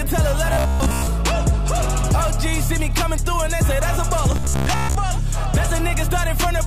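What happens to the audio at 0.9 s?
At 0.9 s the audio is in the middle of a stretch of robotic sound from repeated short buffers, running from 0.53 to 1.07 s. The sound turns rigid and metallic, with a steady buzz near 66.7 Hz. That pitch fits a 15 ms slice being replayed over and over. The likely cause is audio arriving too slowly, so the player loops its last buffer. Roughly seven tenths of this stretch is repeats, and the skipped audio is lost.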